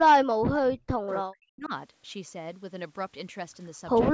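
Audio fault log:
0.13–1.71 s, speech suppressed in double talk: the speech sinks by up to about 40 dB across roughly one and a half seconds, likely because the echo canceller, with both sides talking at once, could not separate this talker from loudspeaker echo and turned both down.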